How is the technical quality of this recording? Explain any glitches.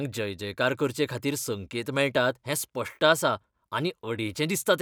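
The signal has no technical faults at any point, so there are no glitches to explain.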